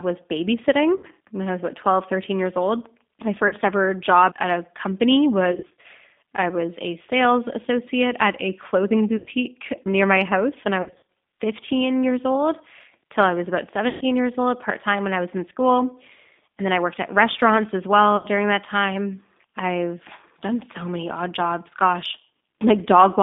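Throughout, the speech carries G.729 codec damage. Everything sits inside a telephone band of roughly 200 Hz to 3.6 kHz, and at 8 kbit/s the voice is rebuilt from a filter, a pitch predictor and a few pulses per frame, so it sounds rough and faintly synthetic. Simple band-limiting would only dull the voice. This roughness comes from the resynthesis itself.

On top of that, VoIP packet loss concealed by the speech codec occurs at 0.97–1.07 s, 3.48–3.54 s, 5.52–5.86 s, 9.17–9.29 s, 10.82–11.03 s, 13.89–14.03 s and 18.17–18.27 s. Each gap is about 30 to 120 ms long. The two longer stretches instead lose about 180 and 160 ms in short bursts spread across the span. At each gap the decoder keeps extending its last pitch and filter as a buzzy tone or coloured noise that fades, and the voice stays weak just after. A plain dropout would go silent or click rather than buzz.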